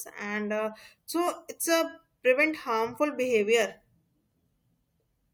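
At 1.27 s, between "and uh" and "it's a prevent harmful", damaged data in the compressed stream causes a brief blip. From 4.32 to 4.61 s it happens again, longer. Each time the decoder misreads corrupted frames, loses sync and hunts for the next header.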